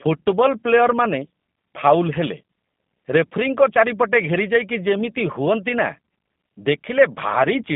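Throughout, the speech carries plainly audible G.729 codec damage. It sounds rough and synthetic, which fits an 8 kbit/s coder. The band runs from about 150 Hz to 3.6 kHz, with nothing above.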